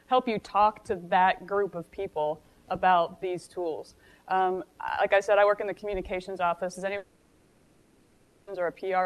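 From 6.97 to 8.48 s the sound gives way to a synthetic buzzing continuation for 1.5 s, likely a long network dropout; its length sets it apart from brief packet-loss glitches.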